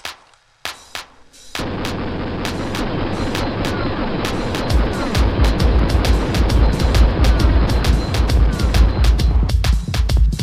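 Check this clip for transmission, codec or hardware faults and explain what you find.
Two faults are present: a doubled audio track running through the whole clip, and one block of digital silence.

The doubled audio track is audible from start to finish. A second, full-band copy of the sound trails the original by about a second, at roughly the same level. It likely comes from the same signal being captured again through a slower path. Unlike a real echo or reverb, the copy has no decay and no room colour.

The block of digital silence comes at 5.79 s. For about 0.25 ms the sound cuts out and then returns with no fade, so it is heard as a tick or dip rather than silence. That points to an output buffer not being filled in time. A codec dropout would be smeared or concealed; these hard edges are not.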